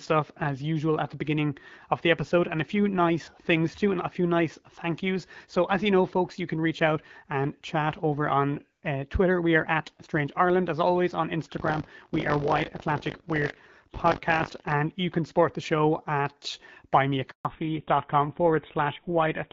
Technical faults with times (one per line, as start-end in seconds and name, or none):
11.56-14.74 buffer tearing
17.31-17.45 handover gap
17.45-19.53 fallback to narrowband